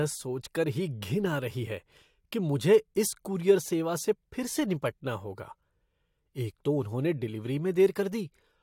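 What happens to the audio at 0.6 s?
Nothing goes wrong at 0.6 s; the speech carries on intact through that moment with no audible fault.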